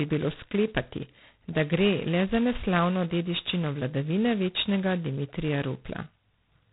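Throughout the speech, G.726 ADPCM damage is heavy: a harsh, rasping hiss rises and falls with the speech level, which fits 16 kbit/s coding with too few bits per sample. A spectrogram shows a hard ceiling at 3.8 kHz and grainy noise filling the speech bands.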